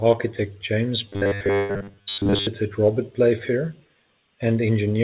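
From 1.07 s to 2.47 s the speech turns into robotic sound from repeated short buffers: a rigid, metallic buzz fixed at 100 Hz, which fits a 10 ms chunk being played again and again. The likely cause is audio arriving too seldom, so the receiver repeats its last short buffer while most of the real signal in this stretch is skipped.

Inside that stretch, from 1.56 s to 1.71 s, a call audio freeze likely occurs as the jitter buffer runs dry. The last sound is held for 130 ms as a fading buzz or hiss and never drops to silence. When audio resumes, it continues where it stopped. Nothing is lost, but everything after this point is delayed by 130 ms. That separates it from the robotic fault around it, which drops audio rather than adding time. Both faults ride on a call path band-limited to 4 kHz.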